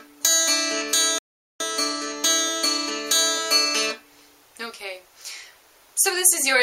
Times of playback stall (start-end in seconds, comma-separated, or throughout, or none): 1.18-1.60